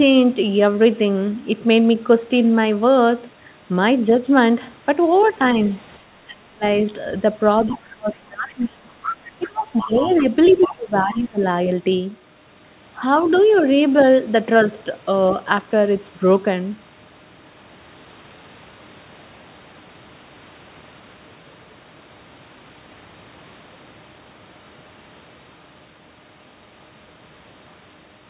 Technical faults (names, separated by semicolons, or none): speech suppressed in double talk; other side's voice leaking through